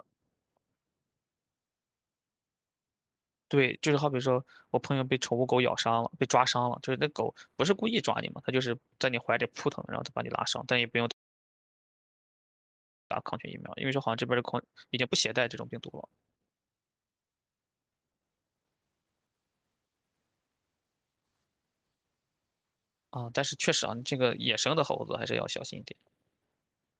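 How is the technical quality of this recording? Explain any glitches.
The call audio has two glitches, heard over a call codec path whose band stops near 12 kHz, which fits Opus at about 32 kbps.

From 11.11 to 13.12 s there is a call audio freeze. The sound stops and nearly the whole 2 s is silence. Packets were likely held up in transit, so the jitter buffer ran empty. Nothing is lost; the audio resumes where it stopped.

From 13.84 to 19.28 s there is a jitter buffer speed-up. The speech runs at 136% speed with unchanged pitch and sounds hurried. The receiver trimmed short pitch-period pieces, about two seconds in total, to recover the delay.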